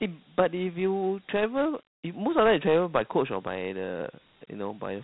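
From start to finish the speech carries Dialogic VOX ADPCM coding. This is the 4-bit adaptive scheme used for phone menus and voicemail. Each sample is stored as a small step change, so fine detail is lost. The damage is plainly audible: a gritty hiss rides along with the speech. Nothing is heard above 3.9 kHz, so the sound is dull and phone-like. The narrow band and grain point to about 32 kbps at 8,000 samples a second.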